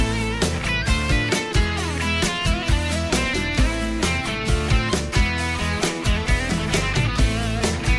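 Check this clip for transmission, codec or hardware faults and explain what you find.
No transmission or hardware faults.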